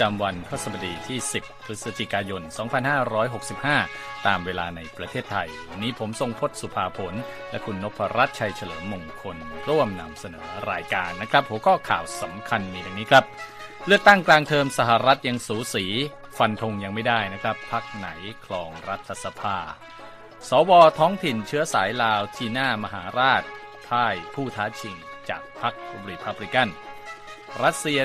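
Nothing stands out here: no dropouts, clicks, glitches or other technical trouble turn up anywhere in this recording.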